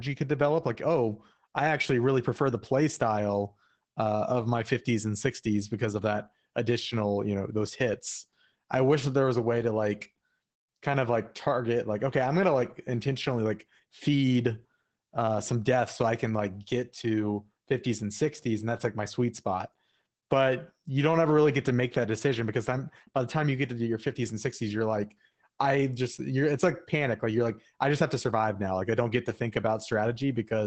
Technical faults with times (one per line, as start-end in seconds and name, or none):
0.00-30.66 Opus voice compression